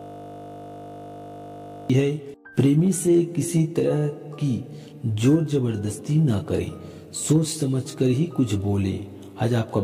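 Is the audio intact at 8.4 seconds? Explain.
Yes, the audio at 8.4 seconds is intact, with no dropout, click, distortion or other fault at that moment.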